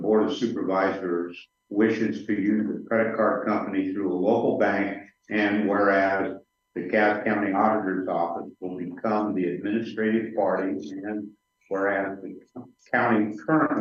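No technical faults can be heard anywhere in this audio.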